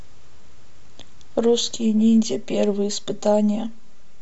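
Speech with channel delay (comb filtering) from 1.77 s to the end: one channel lags by around 5 ms, so the mono sum turns hollow and phasey. A spectrogram shows fixed horizontal notch bands, the first near 100 Hz, then repeating roughly every 200 Hz.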